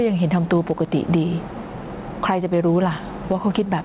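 Throughout the speech, the input gain is likely set far too high, so a fast limiter clamps down on each loud syllable. This causes gain pumping: the background swells by around 10 dB in pauses and ducks under the speech, leaving a squashed sound.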